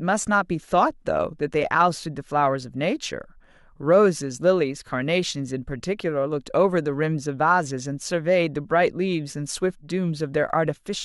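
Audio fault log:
No faults detected in the speech at any point.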